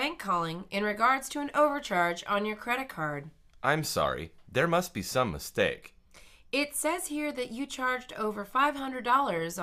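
Nothing is technically wrong with this clip.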